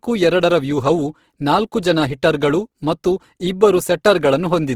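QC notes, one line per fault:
Throughout, Opus compression: the speech sounds rough and grainy, with a noisy, sandpapery texture on sustained sounds rather than a swirling or hollow quality, though the bandwidth still stays full. This is likely Opus in its music (CELT) mode at around 16 kbps. At that rate it keeps each band's overall energy but runs short of bits for fine detail, so it fills bands with noise or copied lower content.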